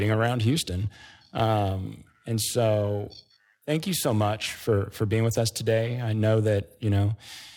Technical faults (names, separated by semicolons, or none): periodic clock jitter